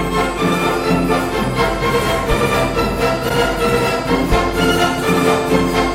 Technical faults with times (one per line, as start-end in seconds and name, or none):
3.25-3.31 damaged data in a compressed stream